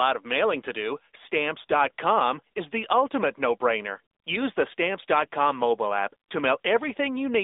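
Throughout, the speech is thin and boxed-in, with nothing above 3.8 kHz, and has a plainly audible buzzy, synthetic edge. It has passed through the AMR narrowband mobile codec, which resynthesises the voice from a vocal-tract model, here at a rate suggesting about 10 kbps.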